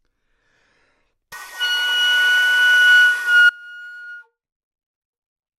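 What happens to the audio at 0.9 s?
Nothing goes wrong at 0.9 s; the sound carries on intact through that moment, with no dropout, click or distortion.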